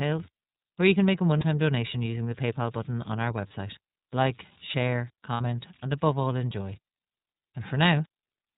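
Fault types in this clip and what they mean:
converter idle tones: A faint, steady whistle around 5 kHz, about 26 dB below the speech, sits in the pauses and roughens quiet passages. An undithered delta-sigma converter given very small input settles into repeating bit patterns that produce this tone.
iLBC codec: The speech sounds plainly rough and slightly synthetic, with nothing above 4 kHz. iLBC codes each 30 ms frame's excitation independently at a low rate, which fits its 13.33 kbps mode. That caps the bandwidth and leaves this audible coarseness.
lost iLBC frames: At 1.38 s and 3.47 s a 30 ms stretch, and at 5.34 s a 60 ms one, turn into a brief held, buzzy vowel-like sound. Missing packets make the decoder repeat the last pitch cycle with noise, and the speech recovers immediately afterwards.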